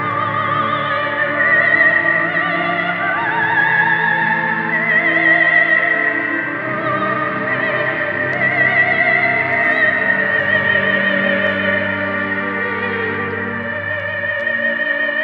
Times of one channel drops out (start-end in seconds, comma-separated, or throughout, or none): none